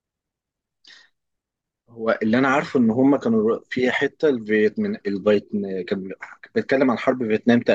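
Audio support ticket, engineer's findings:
No audible faults found.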